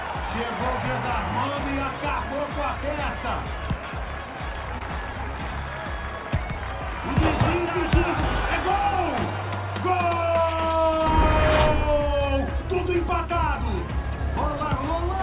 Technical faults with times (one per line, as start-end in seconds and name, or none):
4.78-4.83 short stall from a late packet